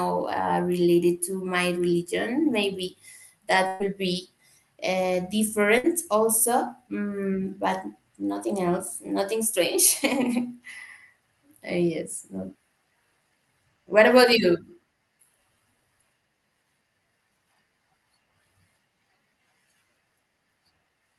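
At 3.67 to 3.83 s, and again at 5.78 to 5.87 s, there's a burst of packet loss. The receiver stretched the last sound into a fading buzz or hiss, and about 120 ms, then 60 ms, of speech just vanish.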